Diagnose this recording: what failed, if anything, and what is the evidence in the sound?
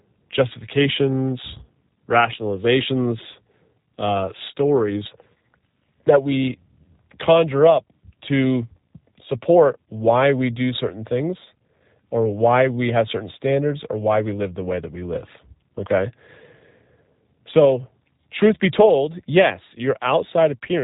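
G.729 codec damage, present throughout the whole recording, at the codec stage. Nothing above about 3.8 kHz survives, and the speech has a plainly audible rough, synthetic quality, which fits an 8 kbit/s G.729A encode. The codec discards the waveform and rebuilds each 10 ms frame from a vocal tract filter, a pitch predictor and a handful of pulses, so the fine texture of the voice is replaced by a buzzy approximation.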